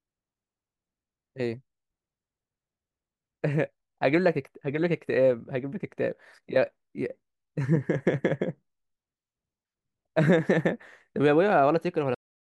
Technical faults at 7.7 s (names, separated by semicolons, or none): none